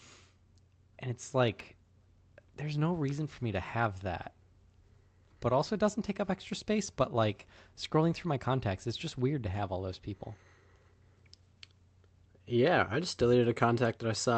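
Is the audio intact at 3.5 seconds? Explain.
Yes, the speech at 3.5 seconds is intact, with no dropout, glitch or other fault at that moment.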